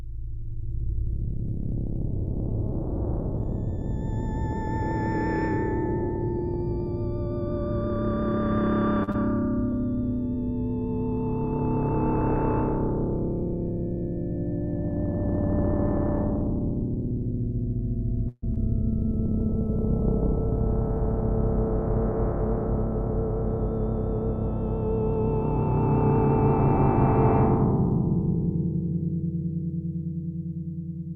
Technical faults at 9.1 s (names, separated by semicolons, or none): short stall from a late packet; short concealed packet loss